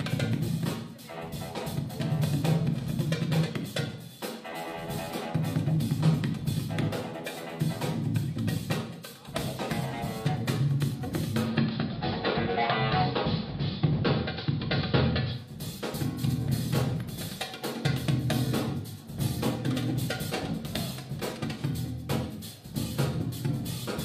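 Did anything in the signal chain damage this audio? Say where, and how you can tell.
Yes. The damage happened at the receiver, upstream of capture: the audio shows a digital radio blending to analogue between 11.34 and 15.57 s. A 275 ms cross-fade moves into AM. The level shifts by about 6 dB and a hiss floor appears, roughly 35 dB below the programme. The set lost the digital stream, substituted the same station's AM carrier, then faded back once reception recovered.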